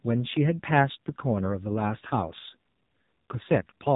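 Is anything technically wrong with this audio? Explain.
Yes, AMR narrowband mobile codec damage runs throughout. The speech is cut off above 3.8 kHz and sounds buzzy and synthetic, which fits heavy AMR-NB coding near 5.9 kbps. Unlike a simple low-pass filter, the voice itself is rebuilt from a coarse pulse-driven model.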